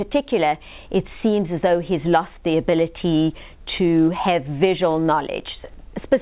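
No faults are audible; the band stops at 4 kHz, which points to a narrowband telephone codec such as G.711 at 64 kbps on the call path.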